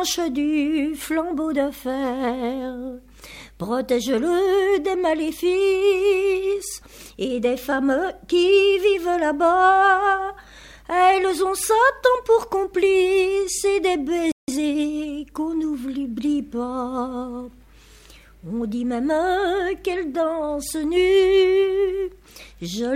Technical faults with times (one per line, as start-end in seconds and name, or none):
14.32-14.48 playback stall
14.48-14.80 time-compressed catch-up